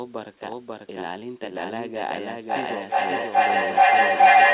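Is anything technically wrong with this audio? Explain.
Yes. Throughout, a doubled audio track is present: a second, likely out-of-step capture path mixes in a full-band copy, equally loud, about half a second behind, so everything is heard twice with no room decay.

From 2.5 s to the end, a feedback howl builds: a microphone-to-loudspeaker loop gains level each trip, growing into a tone around 700 Hz, pulsing roughly every 0.4 s, peaking about 17 dB above the speech. The call path's cut-off at 4 kHz is also audible as missing top end.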